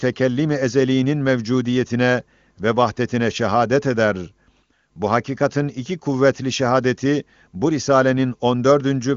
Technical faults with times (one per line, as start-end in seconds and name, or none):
none